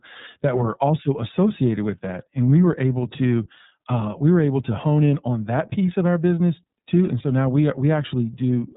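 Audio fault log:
Throughout, iLBC codec: nothing above 4 kHz; speech sounds plainly rough and synthetic from excitation coded independently per frame, fitting 30 ms frames at 13.33 kbps.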